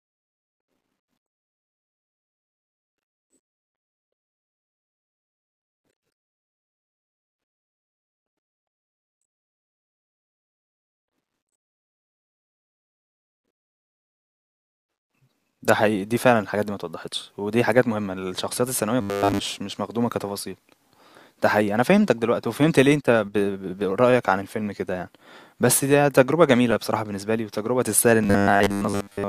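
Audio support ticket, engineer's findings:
Robotic sound from repeated short buffers, speech, at 9.83–11.08 s, 19.01–19.39 s and 28.24–29.29 s. Rigid metallic buzz at 100 Hz. It still loosely follows the words. Likely cause: audio arriving too seldom, with the gaps filled by looping the last 10 ms segment. The fixed loop length sets the 100 Hz pitch. Most of the audio in the first and last spans is repeats, and all of it in the middle span.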